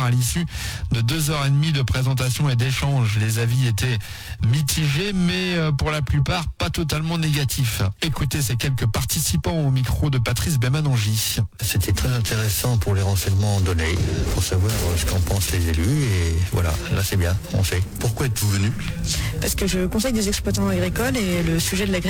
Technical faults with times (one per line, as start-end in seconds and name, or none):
0.00-22.09 periodic clock jitter